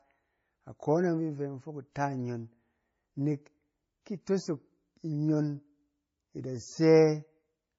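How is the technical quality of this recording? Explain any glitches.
The recording is degraded by layered compression that runs through the whole speech clip.

Throughout, the speech has a dull ceiling with nothing above 7.6 kHz, plus two overlapping kinds of smearing and swirl. This is likely transcoding between lossy codecs. It sounds like a low-rate MP3 around 24 kbit/s, then WMA around 64 kbit/s, with the second codec re-encoding the first one's artefacts. A single lossy encode would leave only one consistent artefact texture.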